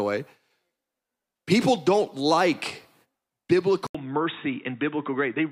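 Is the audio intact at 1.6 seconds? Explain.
Yes, the speech at 1.6 seconds plays through intact, with no dropout, click, distortion or other audible fault at that moment.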